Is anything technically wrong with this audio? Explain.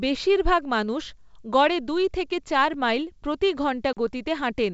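Yes. Two blocks of digital silence break up the speech, which is band-limited to about 7.7 kHz by normal G.722 coding at 64 kbit/s. At 2.74 s, between "গড়ে দুই থেকে চার" and "মাইল প্রতি", a 4 ms dropout registers as a single tick. From 3.93 to 3.97 s, after "থেকে চার মাইল প্রতি", a 39 ms gap is heard as a brief hole. Each occurs when output samples are zeroed without a fade, likely from a missed buffer deadline.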